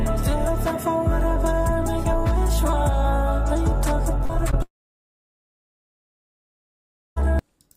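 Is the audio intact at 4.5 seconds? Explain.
No. Between 4.51 and 4.54 s there is a short concealed packet loss: about 20 ms of audio never arrived, and the receiver covered roughly 12 ms of it by extending the preceding sound before blending back. The result is a brief smear or wobble rather than the abrupt silent hole a plain dropout would leave.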